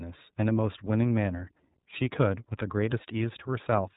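Throughout the speech, the signal has passed through the iLBC codec, which codes each 30 ms frame's excitation independently of the one before. The damage is plainly audible: the voice is intelligible but rough and slightly synthetic, with a grainy, buzzy texture. Its frame structure points to the 13.33 kbps mode. Everything above 3.8 kHz is gone, so sibilants lose their crispness and the sound is thin and telephone-like.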